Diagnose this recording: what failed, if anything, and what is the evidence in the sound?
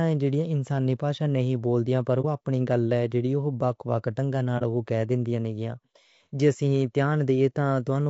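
Codec stage. The speech sounds rough and grainy throughout, with noise between harmonics. Short frames resolve pitch poorly. The likely cause is low-delay AAC compression near 32 kbps.

Network-to-decoder stage. AAC frame loss with muting leaves brief dips at 2.21 to 2.25 s and 4.58 to 4.62 s. Each fits one zeroed frame, faded by overlapping windows.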